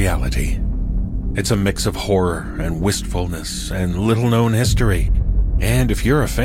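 At 5.07 s to 5.23 s the clip has frames out of order. Two neighbouring runs of about 70 ms each were delivered in swapped sequence, which fits runs of three frames apiece, and decoded as received. The stretch sounds like a brief garbled flutter, and no time is lost. On a waveform, the envelope jumps discontinuously at each seam. A spectrogram shows two short blocks transposed, with thin vertical lines at the boundaries.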